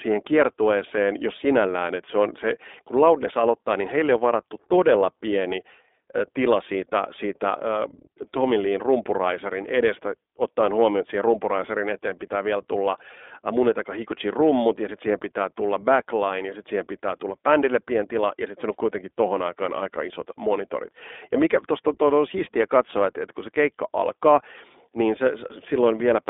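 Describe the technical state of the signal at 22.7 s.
At 22.7 s the iLBC codec damage that runs through the whole clip is present: each 20 ms block is coded on its own at a rate that fits 15.2 kbps, leaving a 300 Hz to 3.6 kHz band, nothing above 3.8 kHz, and plainly rough, synthetic-sounding speech.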